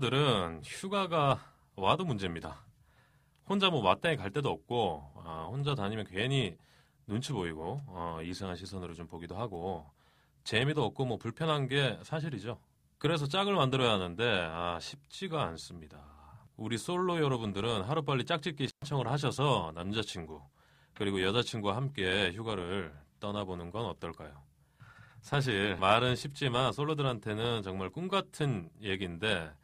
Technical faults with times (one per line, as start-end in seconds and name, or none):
18.67-18.83 intermittent contact